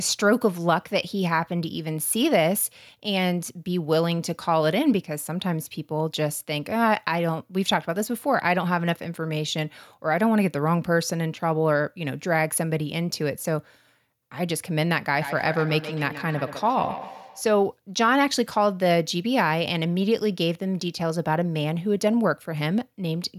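From 15.14 to 17.44 s, a second device in the same room plays the call back and this microphone picks it up again, where the echo canceller cannot remove it. The result is a feedback echo between two devices. Speech comes round again roughly every 150 ms, at its loudest about 11 dB below the direct speech.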